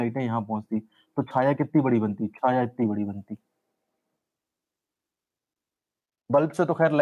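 Nothing in the audio stood out as a technical problem on listening.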